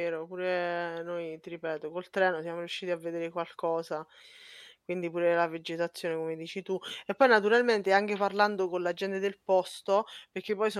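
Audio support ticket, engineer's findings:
No technical faults detected in the speech signal; no dropouts, clipping, distortion or timing irregularities found in the path.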